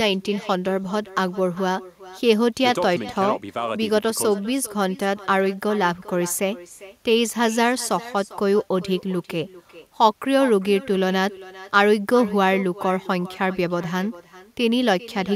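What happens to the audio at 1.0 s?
At 1.0 s the speech carries echo with no canceller, present throughout. A far-end loudspeaker copy returns roughly 400 ms later, about 18 dB quieter and thin.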